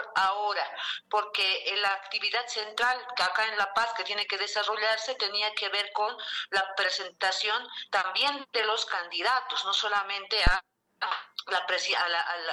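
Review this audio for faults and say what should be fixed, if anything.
A deep, short thump lands at 10.47 s and is gone by 10.54 s, peaking at about -10 dBFS and dying away within roughly 15 ms. It is a phantom power thump: the supply on the live input was switched while the channel was open, and that sudden DC step passed through the input's coupling capacitors as one low-frequency pulse. To prevent it, mute or pull down the channel before switching phantom power, and unmute only after it settles.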